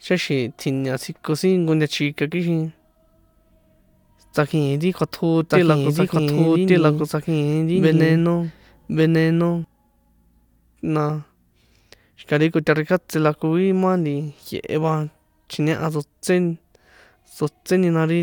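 A doubled audio track appears from 5.50 to 9.64 s: the speech is heard twice, with a full-band copy trailing about a second behind at roughly equal level and cutting in and out abruptly, likely from a slower capture path or an out-of-step edit.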